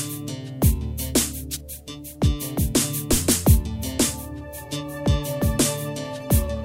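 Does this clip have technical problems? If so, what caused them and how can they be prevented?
Yes, there's a phantom power thump from 3.13 to 3.19 s, peaking around -11 dBFS and dying away within about 13 ms. Phantom power got switched on or off on the live input, and that voltage step went through the coupling capacitors. Mute the channel first.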